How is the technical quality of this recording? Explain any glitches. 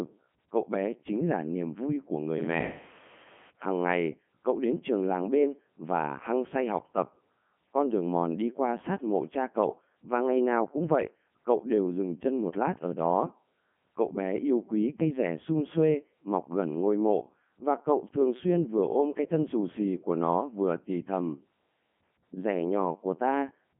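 The recording is poor: the speech has passed through a Codec 2 vocoder for its whole length. Codec 2 sends no waveform, only pitch, voicing, energy and a coarse spectral envelope, and the decoder rebuilds the voice from sine waves, so the speech sounds robotic and buzzy, with heavy damage. It runs at the top 3.2 kbit/s mode. The band runs roughly 150 Hz to 3.4 kHz, and a spectrogram shows nothing above 3.6 kHz, with harmonics drawn as unnaturally clean, evenly spaced lines. The waveform looks smooth and synthetic rather than natural.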